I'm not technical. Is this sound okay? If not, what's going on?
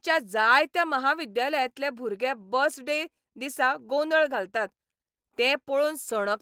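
No. There is clock drift between sender and receiver. The device that recorded and sent this speech kept time about 1.5 percent slower than the device playing it back, so the receiving side kept running slightly short of sound. Unlike a dropout, where sound briefly vanishes into silence, the problem here runs quietly through the whole clip as a slight unsteadiness in the pace of the speech.

The second fault is the repeated timing corrections that the receiver made to cope. From about 0.38 s to 6.21 s it kept repeating tiny slivers of sound to fill the shortfall, stretching the stretch to roughly 99 percent speed and adding about a twentieth of a second overall. These patches come at uneven moments and always add time, never cut it.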